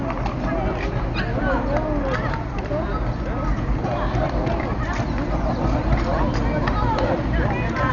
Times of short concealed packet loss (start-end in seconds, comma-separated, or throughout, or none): none